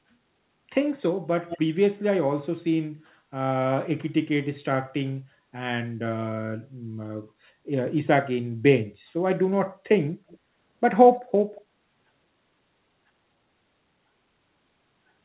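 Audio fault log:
1.49 to 1.59 s, echo leak: A delayed copy of the speech trails it by about 190 ms, roughly 10 dB below the main signal. It sounds like a brief ghost repeat. The likely cause is a far-end loudspeaker whose echo canceller let part of the pickup return.
10.28 to 10.38 s, 11.12 to 11.20 s, 11.55 to 11.61 s, echo leak: Three more brief scraps return with the same 190 ms delay. They are much quieter, about 25 dB down.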